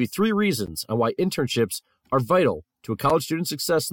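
At 0.66 s, between "you three" and "on why", the speech drops out for about 11.6 ms in a block of digital silence, which fits a 512-sample buffer left unfilled in time. Shorter holes follow at 1.75 s (3.1 ms, just before "are vital to a") and 3.10 s (5.8 ms, right after it). Each is heard as a tick or dip. The waveform shows a flat line near zero with abrupt edges, and the spectrogram shows a blank vertical slot.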